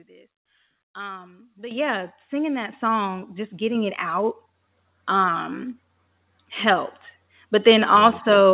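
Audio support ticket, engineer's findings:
Microphone volume stepped up, four times: 1.71 s (about +10 dB), 2.73 s (about +4 dB), 3.75 s (about +3 dB), 4.77 s (about +3 dB). Voice and room noise jump together, each step instant, roughly a second apart. Component: auto gain control in the call client bumping the device input volume while the mic reads quiet. Note the audio is band-limited with nothing above 4 kHz, which fits a G.711 narrowband call path at 64 kbps.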